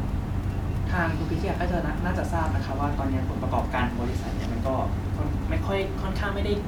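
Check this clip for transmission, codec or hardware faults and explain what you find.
No transmission, codec or hardware faults can be heard in the speech; the only thing beneath it is the room's own background noise, about 22 dB below the speech, which belongs to the recording rather than to the system.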